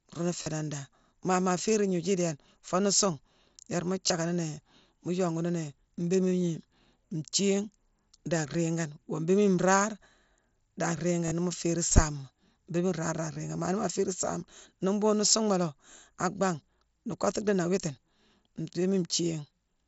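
Concealed Bluetooth headset packet loss occurs at 0.42–0.47 s, at 4.08 s just after "foo nuu suungh yéérma", at 11.25–11.32 s and at 13.33–13.36 s. The receiver fills missing voice packets by repeating recent waveform, producing brief buzzy held tones with a slight warble on recovery.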